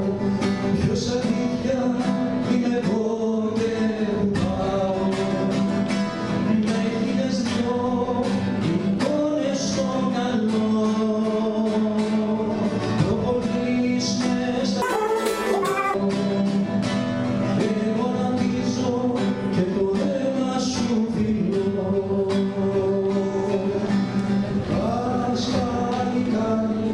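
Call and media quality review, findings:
Wrong sample rate, 14.82 to 15.94 s. Sound suddenly runs at double speed and jumps a full octave, 12 semitones, up. Speed and pitch shift together, so no time-stretch is involved. Probable component: playback or resampling stage. Mechanism: samples clocked out at twice their recorded rate with no conversion. Fits 24 kHz material played at 48 kHz. Check rate negotiation at that segment boundary.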